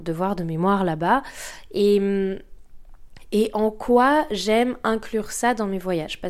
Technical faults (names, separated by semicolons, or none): none